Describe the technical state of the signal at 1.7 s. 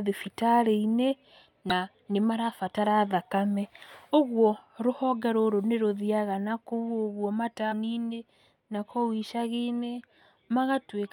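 At 1.7 s the speech is hit by damaged data in a compressed stream, lasting from about 1.70 to 1.72 s. Corrupted bytes reach the decoder there, so it rebuilds that brief stretch from wrong values and loses sync until it finds a valid frame header again. The result is a short chirp or blip. A plain dropout would leave silence, and a simple click would be a single impulse.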